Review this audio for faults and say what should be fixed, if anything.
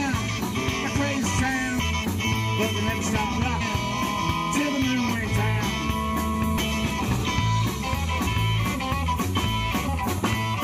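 Compressed frames skipped at 0.83–0.85, 1.78, 3.60–3.62, 6.57, 8.26–8.28 and 9.88–9.90 s. Between a tenth and a third of a second of sound goes missing at each, so the audio jumps ahead at the join. On the waveform this shows as an abrupt envelope discontinuity, and on the spectrogram as a sudden shift in content. To prevent it, check file integrity after transfer and add error-resilient framing or retransmission so damaged frames are repaired rather than dropped.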